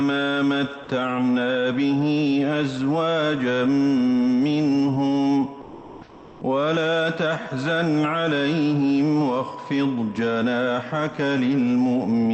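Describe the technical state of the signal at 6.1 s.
At 6.1 s the background turns into a smooth, featureless hiss, shifted by about 2 dB and sitting about 25 dB below the loud parts, from 5.61 to 6.41 s. This is comfort noise in place of the background, likely from discontinuous transmission: the sender paused, and the receiver synthesised noise.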